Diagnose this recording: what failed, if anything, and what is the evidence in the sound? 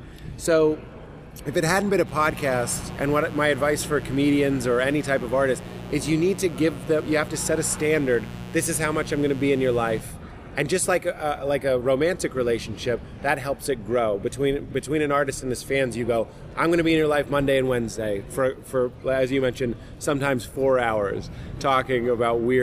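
The analogue wiring let in mains buzz. A steady, raspy buzz runs from 2.04 s to 10.04 s, roughly 15 dB below the audio. Its harmonics of 60 Hz extend to several kHz. Sharp switching spikes from a dimmer, rectifier or unshielded cable cause it, twice per mains cycle.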